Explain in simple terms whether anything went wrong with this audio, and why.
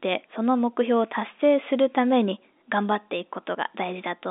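No faults can be heard.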